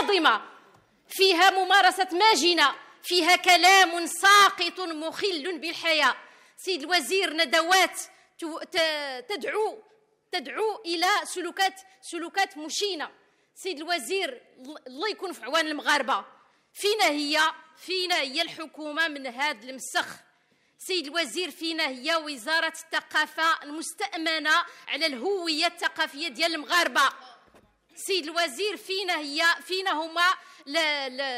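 No technical faults are audible anywhere in the recording.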